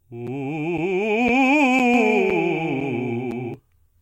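The music arrives in half-second chunks with a silent hole of about 7 ms left at each join, producing a gap between chunks at 0.27, 0.78, 1.28 and 1.79 s: brief, hard-edged dropouts that tick through the sound at a steady rate without losing any of it.

From 1.94 to 3.54 s a doubled audio track appears, likely from the same signal being captured a second time along a slower path. A full-band copy, roughly 5 dB quieter, trails the original by around a fifth of a second. It is a dry, uncoloured repeat that switches on and off abruptly.

The chunk gaps continue beneath it at 2.30, 2.81 and 3.31 s, still the same short clean holes at half-second spacing.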